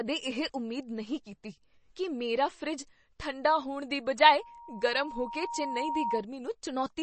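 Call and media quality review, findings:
MP3 compression, throughout: plainly audible watery, swirling artefacts on the speech and no content above 8.3 kHz. Likely a low-bitrate MP3 encode, consistent with around 32 kbps. When bits run short, the encoder drops weak frequency lines that flicker frame to frame, and it applies a fixed treble cut-off.

Loudspeaker feedback squeal, 4.39 to 6.25 s: a 940 Hz tone that swells over roughly 1.5 s until it is about as loud as the speech. Mic-to-speaker loop gain exceeded one at that frequency, so the tone kept reinforcing itself around the loop.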